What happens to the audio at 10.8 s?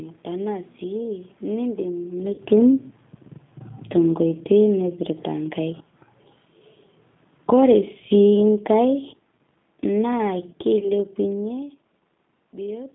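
At 10.80 s a VoIP packet is lost and concealed by the speech codec. About 20 ms of audio goes missing, and the decoder fills the gap by extending its last pitch and filter at falling gain. Up to 10.91 s this gives a brief buzzy tone or coloured noise that fades, rather than the hard silence or click of a plain dropout, and the sound stays thin for a moment after real packets resume.

The same moment falls inside an automatic gain fall running from 7.34 to 11.5 s, a gradual drop of about 6 dB. Unlike a talker moving away, the room background sinks along with the sound.

The whole call also passes through the G.729 codec at 8 kbit/s, so its rough, band-limited character carries on around the concealed gap.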